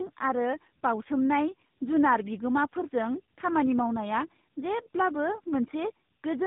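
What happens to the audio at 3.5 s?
At 3.5 s the speech carries tandem speech coding, present for the whole clip rather than starting there. The sound points to two low-rate speech codecs in a row, consistent with a GSM full-rate stage feeding an AMR-NB stage at 12.2 kbit/s, with G.711 A-law between them. Each coder re-encodes the previous one's already damaged output, so the errors compound: the speech sounds rough, muffled and warbly, with nothing above 3.8 kHz.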